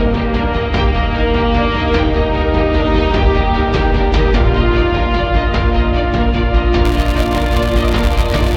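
From 6.85 s to the end at 8.56 s, a filter restarted on every block drops its stored state and begins each block from silence, leaving a small transient every 5 ms. This is heard as a 200 Hz buzz that rises and falls with the sound's level. A waveform shows evenly spaced spikes, and a spectrogram shows harmonic lines stacked at 200 Hz intervals.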